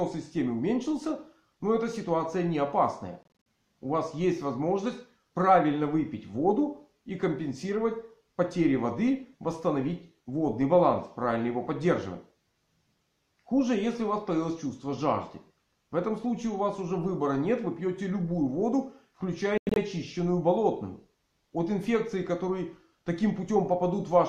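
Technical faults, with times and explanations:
3.23 to 3.27 s, Bluetooth dropout: packets likely arrived too late and were discarded, leaving about 139 ms of silent gaps over 232 ms, the longest 46 ms, before the sound resumes further along.
19.58 to 19.77 s, Bluetooth dropout: late packets were likely dropped again, cutting about 139 ms in holes across 186 ms, one lasting 93 ms, before the sound resumes further along.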